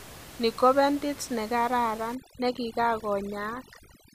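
A speech recording with room noise sitting about 19 dB below the voice up to "ko bentit negararan", after which overdone noise removal takes hold from 2.15 s to the end. Aggressive spectral gating pushes bands near the noise estimate to silence, leaving a lowered background with twinkling specks.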